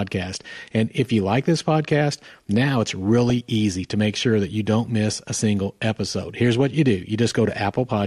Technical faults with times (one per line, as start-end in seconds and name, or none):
0.00-8.07 MP2 compression
3.30 DAB burbling